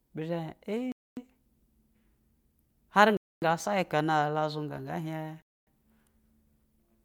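At 0.92, 3.17 and 5.42 s the speech drops into a hard-edged 250 ms hole, a gap between chunks where silence is inserted between 2-second blocks.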